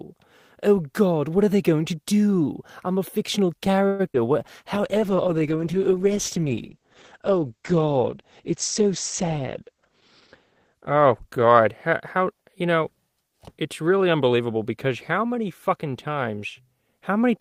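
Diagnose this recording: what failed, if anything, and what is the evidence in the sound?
At 3.87 to 4.01 s the speech stalls into a fading buzz or hiss for about 117 ms, then resumes intact: likely a call audio freeze, the network jitter buffer running dry.

At 4.13 to 4.16 s a brief smear replaces a moment of speech, a short concealed packet loss: about 40 ms never arrived and was patched by extrapolation.

From 4.76 to 12.57 s the speech turns muffled and rough, a call bitrate drop: the codec fell from 32 to 11 kbps, bandwidth from 20 kHz to 8 kHz.

At 9.24 to 9.90 s the speech hurries at 110% speed without a pitch change, a jitter buffer speed-up trimming around 70 ms of pitch periods.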